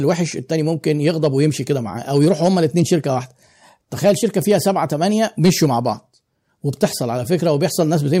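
Hard clipping cuts into the speech five times: 0.88–1.46 s (about 2 dB over), 2.16–2.94 s and 4.05–4.68 s (each about 3 dB over), 5.44–5.66 s (about 5 dB over), and a single brief overload at 6.83 s (about 4 dB over). The loudest peaks exceed what the stage can pass and are sliced flat, which adds high harmonics heard as crackle on loud syllables. Unlike soft saturation's gradual thickening, the distortion starts abruptly and sounds gritty, harshest at 5.44 s.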